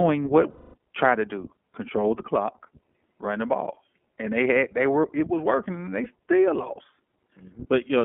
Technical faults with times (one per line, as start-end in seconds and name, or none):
0.00-8.05 iLBC codec
0.50-0.78 lost iLBC frames
6.04-6.07 lost iLBC frames